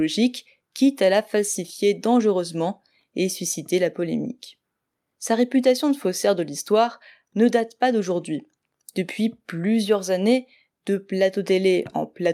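Nothing stood out as technically wrong on listening to this speech recording.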